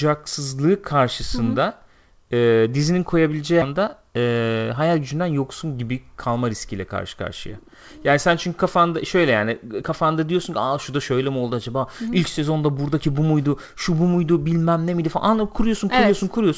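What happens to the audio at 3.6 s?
At 3.62 s there is a skip ahead: roughly a second of audio is lost, most likely because the jitter buffer overflowed and discarded queued audio to catch up with later audio already waiting. Playback jumps forward with no silence or fill at the join, so the sound before and after is spliced almost directly. That seamless splice is what separates it from a dropout, which would leave an audible gap or concealment noise.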